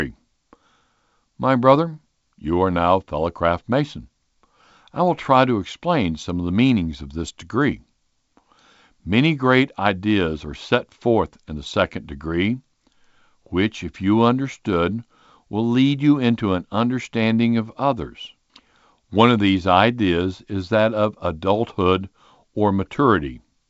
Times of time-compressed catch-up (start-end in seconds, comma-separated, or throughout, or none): none